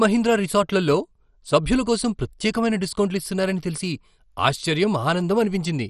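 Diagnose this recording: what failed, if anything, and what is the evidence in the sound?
MP2 compression throughout, a codec fault: the speech is dull and gurgling with nothing above 13.2 kHz, likely from bit-starved sub-bands switching off, consistent with about 56 kbps.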